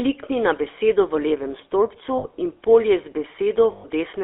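GSM full-rate codec damage runs through the whole clip. This codec models the vocal tract as a filter and drives it with a pulse train that keeps only every third excitation sample. The result is a plainly audible buzzy, gravelly roughness on the speech. The sound fits the 13 kbps full-rate coder. The band is also confined to roughly 300 Hz to 3.5 kHz, so the bottom of the voice is thin and everything above 3.5 kHz is missing.

Lost GSM frames interrupt the speech at 2.18 to 2.25 s, between "levem stolpcu" and "in polje". A 60 ms stretch, which fits three dropped 20 ms frames, was filled by repeating the last good frame's settings. That concealment is heard as a brief, rough, metallic ring. A longer gap at 3.72 to 3.85 s lasts 120 ms, consistent with six lost frames. The repeated frame rings there before normal speech resumes.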